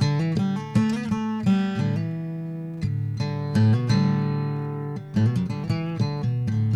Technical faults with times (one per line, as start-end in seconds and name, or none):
none